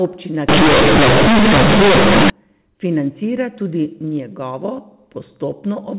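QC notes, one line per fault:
0.49 to 2.30 s: companded audio read as linear. The A-law bytes are played as plain 8-bit samples, with no expansion step. Each sign change near zero now swings the output across about half its range. Quiet speech comes out as loud as the peaks, and the waveform is badly bent. The result is loud, buzzy distortion, with heavy noise in the pauses. Around this stretch, the G.711 telephone band stops at 4 kHz.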